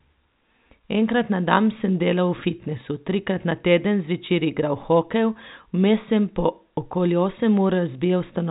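No technical faults are audible.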